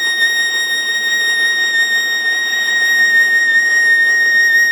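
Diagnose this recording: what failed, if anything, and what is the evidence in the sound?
Nothing failed; the music shows no audible faults.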